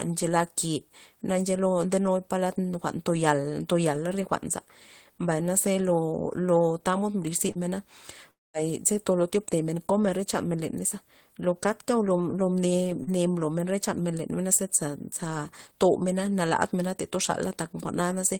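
At 7.51 to 7.58 s there is a short concealed packet loss. About 40 ms of the speech never reached the decoder in time. The receiver covered roughly 33 ms of it by extending the sound just before, then blended back into the real signal. It is heard as a brief smear or wobble, and a short consonant there could be lost.

From 8.31 to 8.57 s the sound breaks off. The last sound carries on as a buzz or hiss that fades. About 0.21 s of near silence follows. Speech then resumes further on, and about 240 ms is simply missing. This is likely a long network dropout, where no audio arrived for that stretch.

At 13.03 to 13.10 s a second short concealed packet loss occurs. Again about 40 ms was missing. Here roughly 41 ms was synthesised from the preceding sound and merged back. It gives the same brief smear or wobble.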